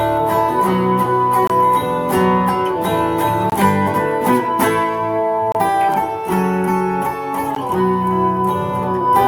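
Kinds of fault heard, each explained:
Gap between stream segments: the segment timestamps don't quite meet, so the player pads with silence, leaving hard-edged holes of 14 to 29 ms every 2 s.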